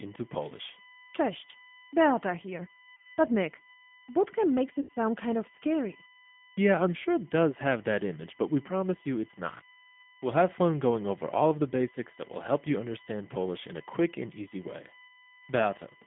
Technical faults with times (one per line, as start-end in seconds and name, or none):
0.00-16.06 USB whine
0.00-16.06 G.729 codec
2.96-3.17 VoIP packet loss concealed by the speech codec
4.81-4.92 VoIP packet loss concealed by the speech codec
9.58-9.63 VoIP packet loss concealed by the speech codec